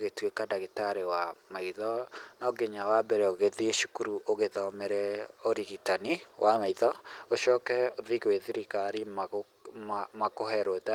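No faults found in this speech; the Opus voice coding runs as designed, with its light, expected coding character.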